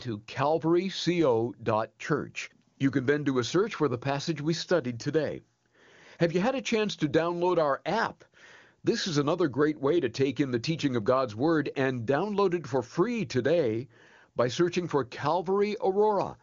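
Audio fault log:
Nothing to flag here, just speech coming through the AMR wideband (HD Voice) codec at 23.85 kbit/s, with the top end stopping around 7.2 kHz as that codec's band does.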